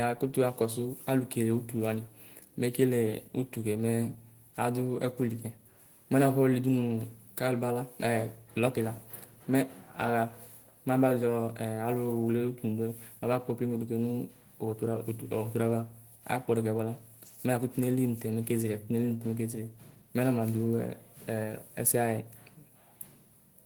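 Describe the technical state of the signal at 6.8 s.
At 6.8 s the speech signal is intact, with no audible technical fault at that moment.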